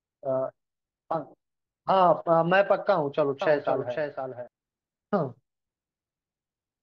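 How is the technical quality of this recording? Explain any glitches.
One glitch stands out in this speech recording. A doubled audio track runs from 3.42 to 4.48 s: a second copy, about 5 dB quieter, trails about half a second behind, likely from a slower duplicate capture path, and starts and stops abruptly.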